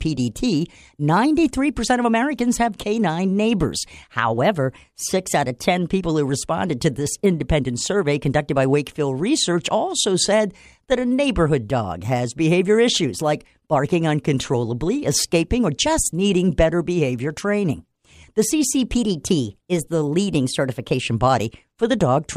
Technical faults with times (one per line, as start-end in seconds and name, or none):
4.38-5.90 drift correction step
18.98-21.01 drift correction step